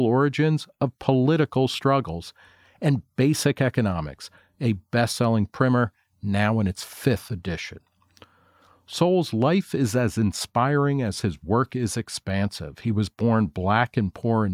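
No technical faults can be heard anywhere in the audio.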